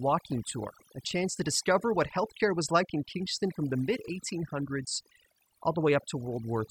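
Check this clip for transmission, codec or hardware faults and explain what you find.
One fault is present, and it runs through the whole recording. It is overdone noise removal, a processing problem rather than a transmission or hardware failure. A noise reduction stage was set far too strong. It pushes individual frequency bands down or out whenever they sit close to its picture of the noise. Quiet parts of the speech fall below that line and vanish too. The gaps between phrases drop to near silence, dotted with twinkling specks.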